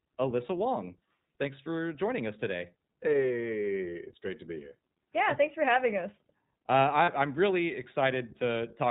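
Speech coded through the iLBC codec: cut off above 4 kHz with a plainly rough, synthetic edge, unlike wideband codecs, which fits iLBC's 15.2 kbps mode. Lost iLBC frames from 7.04 to 7.10 s, about 40 ms (fitting two 20 ms frames), fill with a buzzy held vowel, and the voice recovers immediately rather than smearing afterwards.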